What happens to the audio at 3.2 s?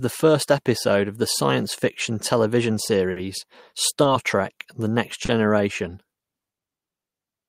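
Right after "the science fiction television", there's a short stall from a late packet, 3.11 to 3.26 s: the receiver stretched the last sound about 50 ms while waiting, so it hangs too long, with nothing lost.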